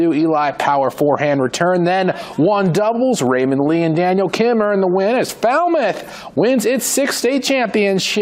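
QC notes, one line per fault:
No faults to note.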